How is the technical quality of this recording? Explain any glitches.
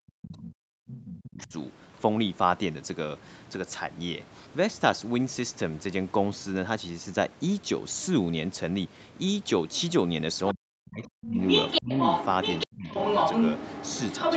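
The recording has clear call-processing problems: the echo canceller repeatedly mishandles moments when both sides talk at once, so the speech drops out in places and a second voice bleeds in.

Speech suppressed in double talk appears from the start to 1.53 s, from 10.54 to 11.37 s, from 11.8 to 11.89 s, and from 12.66 to 12.88 s. The likely cause is an echo canceller that could not separate the near talker from loudspeaker echo while both sides spoke, so it turned everything down. The speech sinks by up to about 40 dB, nearly to silence, for about one and a half seconds at the opening and in shorter gaps later.

The other side's voice leaking through is heard from 11.04 to 11.27 s, from 11.47 to 12.26 s, from 12.42 to 12.67 s, and from 12.88 s to the end. The echo canceller likely failed to remove the far-end audio playing from the loudspeaker, so the microphone picks it up. At first it is a faint scrap about 15 dB under the speech. 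Later stretches reach roughly the same level as the speech or slightly above it, so two voices compete near the end.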